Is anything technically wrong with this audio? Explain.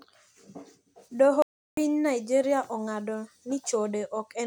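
Yes. From 1.42 to 1.77 s the speech cuts out abruptly into about 350 ms of dead silence before continuing. This is likely a playback stall: the player ran short of data or its thread was held up, so output went quiet until it recovered.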